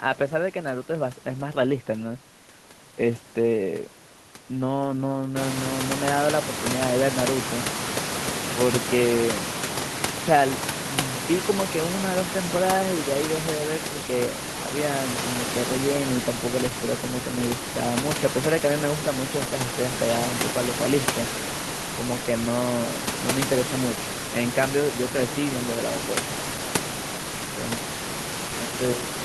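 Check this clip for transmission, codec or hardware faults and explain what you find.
No transmission, codec or hardware fault is audible; the room noise that rises at about 5.5 s belongs to the recording, and the smooth fade-out ending at 29.2 s is an ordinary edit.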